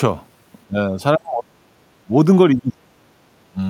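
From 0.67 to 2.12 s, 2.54 to 2.98 s and 3.50 to 3.59 s the speech dips sharply or drops out in pieces, by roughly 40 dB at worst and less in the last span. This is likely speech suppressed in double talk, the echo canceller muting the near talker along with the echo.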